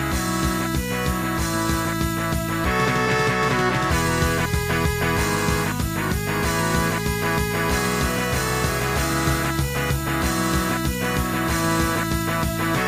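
No technical faults are audible.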